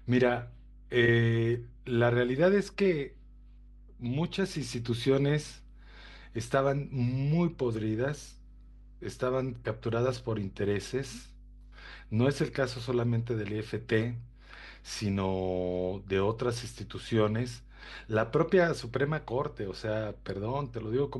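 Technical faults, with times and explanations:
Throughout: mains hum. A steady low 50 Hz tone, about 20 dB below the speech, sits under the speech. Power-line current is coupling into the signal, likely through a ground loop.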